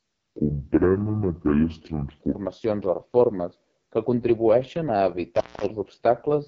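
From start to finish, the speech carries the sound of the AMR wideband (HD Voice) codec at its roughest. Nothing reaches above 7.4 kHz. The top band is filled with shaped noise rather than real detail. The codec rebuilds the voice from a pulse-driven vocal tract model, and here it has too few bits to do it well. The result is raspy and gritty throughout. This damage points to the lowest AMR-WB mode, around 6.6 kbit/s.

From 0.0 to 2.35 s, the opening section plays at the wrong speed. It runs at 0.638 times its proper rate. Speed and pitch drop together. The voice sounds slow, heavy and deep, roughly seven semitones too low. Normal speed returns just before "o reformes que contribueixen". The likely cause is a player or edit running this part against the wrong clock.

From 5.35 to 5.66 s, an intermittent contact breaks the signal, right after "reformes que contribueixen a". A loose plug or cable opens briefly. 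The sound drops out for about 0.21 s. Crackle marks both edges of the gap. Faint hiss remains while the line is open. Then the connection closes and the speech resumes.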